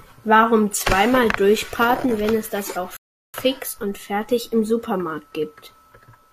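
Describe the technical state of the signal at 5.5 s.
At 5.5 s the speech signal is intact, with no dropout, clipping, glitch or other audible fault at that point.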